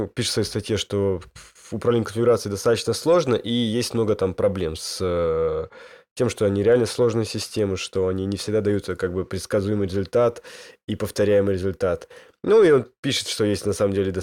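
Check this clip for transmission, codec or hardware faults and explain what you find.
No transmission, codec or hardware fault can be heard anywhere in this speech.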